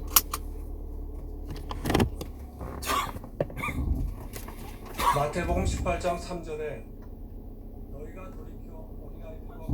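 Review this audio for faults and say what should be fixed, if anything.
Nothing here needs fixing, as no faults turn up anywhere in these sounds.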